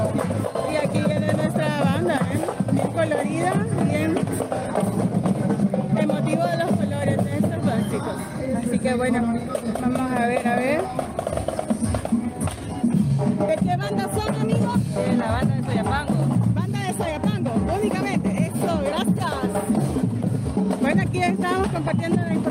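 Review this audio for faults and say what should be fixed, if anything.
No faults were found, so nothing needs fixing.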